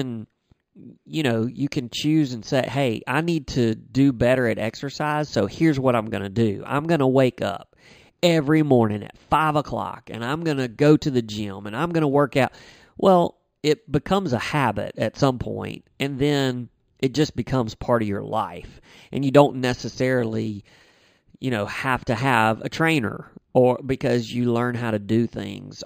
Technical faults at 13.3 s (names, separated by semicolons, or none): imaging from linear upsampling